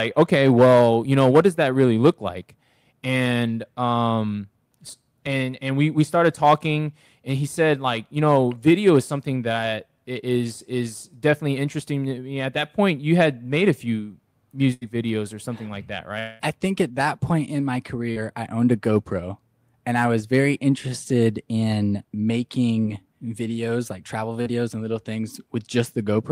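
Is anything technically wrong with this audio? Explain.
Yes, the speech has gaps where stretches of audio were lost in transmission and the receiver covered them over.

At 14.73 to 14.83 s there is a burst of packet loss: about 80 ms never arrived, and the receiver extended the preceding sound through the hole, letting it decay. It sounds like a short held buzz or hiss before the speech picks up slightly further on. On a spectrogram the last frame's harmonics or noise band run flat and fade, then cut to unrelated content.

From 16.19 to 16.41 s the sound is stretched into a fading sustained tone for roughly 200 ms, with no true silence, before speech resumes with a chunk missing. The likely cause is a long network dropout that the receiver bridged entirely by continuing the last sound. A waveform shows a smooth, repetitive decaying stretch; a spectrogram shows smeared, frozen partials dimming across the gap.

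Short concealed packet loss occurs at 18.11 to 18.18 s, 22.82 to 22.86 s and 24.42 to 24.48 s, each losing about 20 to 40 ms. The receiver filled each hole from the previous pitch or noise shape and blended back into the real signal. This is heard as a brief smear or wobble, and a consonant may drop out. Visually these are narrow, blurred patches with discontinuous formants and a slight envelope dip.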